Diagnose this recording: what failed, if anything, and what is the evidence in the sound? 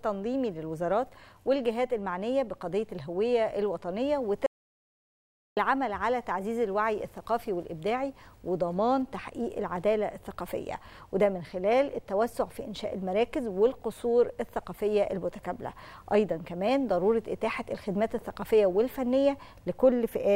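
An audio dropout to silence runs from 4.46 to 5.57 s, about 1.1 s of silence: a flat waveform and a blank spectrogram column. The likely cause is a lost input link.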